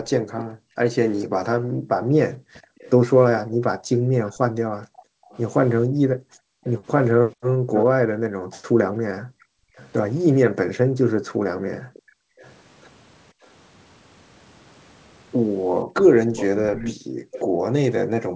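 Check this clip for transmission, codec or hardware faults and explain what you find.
Two faults recur through the speech: a far-end echo that slips back into the call, and background sound that the echo canceller chokes off. The audio is band-limited to 8 kHz, which fits a G.722 call path.

Echo leak, at 0.09 to 0.44 s, 2.78 to 7.84 s, 9.40 to 9.91 s, 11.74 to 13.47 s and 16.36 to 17.41 s: the far end's echo canceller likely failed to fully cancel its loudspeaker pickup. The residue returns as a delayed copy of the speech, about 450 ms late early in the clip, 500 ms at 9.4 s and 553 ms later on. It is quiet in most stretches but fairly prominent at 2.78 s and 16.36 s.

Background gated by the echo canceller, from 0.02 to 12.39 s and from 16.95 s to the end: while the loudspeaker played, the canceller suppressed the microphone hard, by about 40 dB at its deepest. The room sound drops away in bursts totalling around five seconds in the first stretch, then returns when suppression releases.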